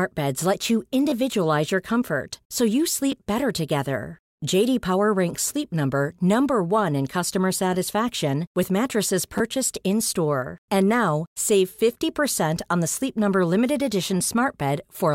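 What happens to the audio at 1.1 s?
New audio failed to arrive in time just after "beds let you", so the device replayed its last buffer, a repeated buffer fault from 1.1 to 1.12 s. A fragment that fits a 10 ms buffer plays twice more, hard-joined, giving a brief buzz and losing about 20 ms of audio.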